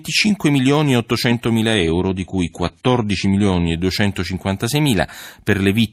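An adaptive stream at a lower bitrate runs from 1.74 s to 3.74 s. For those two seconds the player switches to a cheaper encoding of the same speech, apparently because the connection slowed. The treble is cut off above 11.4 kHz and codec artefacts rise, which points to a drop from roughly 96 kbit/s AAC to around 32 kbit/s. Both switches are abrupt, with no gap, and full quality returns at 3.74 s.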